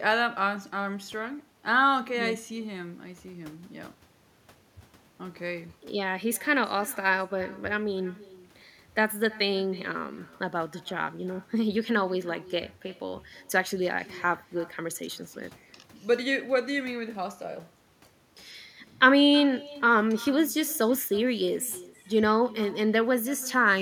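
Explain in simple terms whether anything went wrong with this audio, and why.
Something did go wrong, and it lasts the whole clip. The problem is echo with no canceller. The person on the other end was likely playing the call through a loudspeaker. Their microphone picked that sound up and sent it straight back. Nothing was there to remove it. So every bit of speech returns about a third of a second later. The copy is much quieter and thinner.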